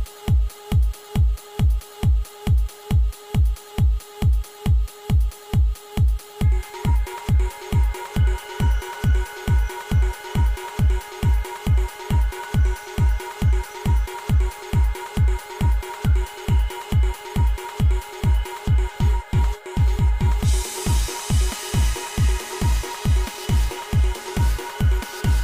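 No technical faults can be heard anywhere in the signal; it holds steady without any disruption, damage or interruption.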